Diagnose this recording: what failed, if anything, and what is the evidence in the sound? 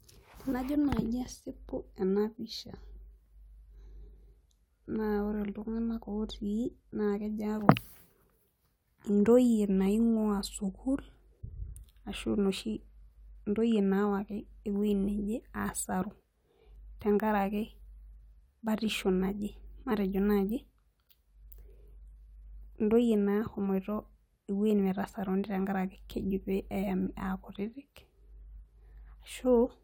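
Nothing in the speech recording points to a failure at any stage of the chain, with the signal holding steady level, continuity and timing throughout.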